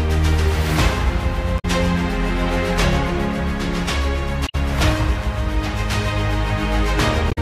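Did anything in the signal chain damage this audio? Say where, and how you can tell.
Yes, at the codec stage: damaged data in a compressed stream at 1.56–1.65 s, 4.46–4.55 s and 7.28–7.38 s. Corrupt bytes make the decoder misread those frames and hunt for the next valid header, so each roughly 0.1 s stretch breaks into a brief squawk or blip.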